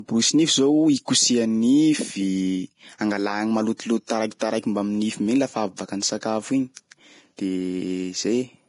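Vorbis compression, heavy and present from start to finish, is the likely cause of the damage in this speech. Nothing reaches above 10.6 kHz, and the upper band sounds hissy and grainy, which fits a low bitrate around 31 kbps. At that rate the encoder codes a smooth outline of the spectrum with a quantised residue on top and quantises the treble so coarsely that its fine detail turns into noise of similar energy, roughening tones and blurring consonant attacks.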